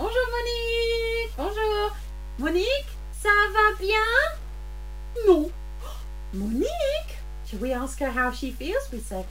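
The sound carries mains hum from start to finish: a steady 50 Hz tone, plus its low harmonics, sitting only around 10 dB under the material. That's a ground loop or a nearby transformer bleeding the power line into the signal. There's also grainy, gritty distortion throughout that tracks the sound itself, roughest in quiet passages, with the grit around 25 dB down. That's the signature of low bit depth without dither, likely a truncation to something like 7 bits with no dither applied.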